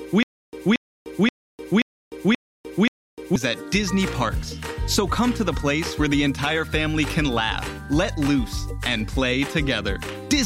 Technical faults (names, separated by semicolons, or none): stutter with silent gaps